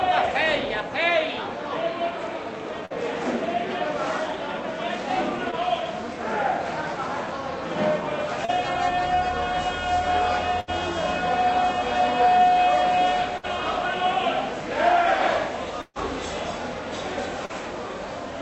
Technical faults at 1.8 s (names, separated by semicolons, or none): none